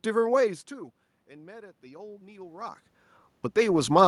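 Automatic gain rising runs from 0.68 to 2.85 s. The speech level at the microphone fell by about 24 dB, likely as the talker moved back around half a second in, and the gain control responded by slowly raising its gain by about 4 dB over two seconds. Because the gain acts on the whole signal, the room noise swells up together with the voice, giving a gradual lift in the background rather than a clean recovery of the speech.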